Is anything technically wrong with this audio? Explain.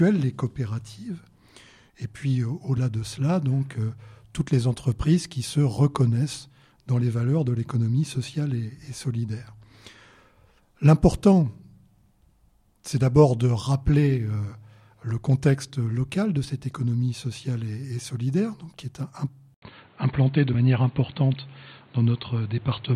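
Yes. At 2.77 s, 19.27 to 19.29 s, and 20.53 s, compressed frames are skipped: roughly two 23.2 ms frames go undecoded each time, so the audio leaps ahead about 50 ms. Each join is heard as an abrupt jump ahead.

From 19.54 s to the end, the input was likely switched to a poorer device. After a silence of 80 ms, the sound turns dull and boxy, with nothing above 4.4 kHz and new background noise about 35 dB below the signal, though the loudness stays much the same.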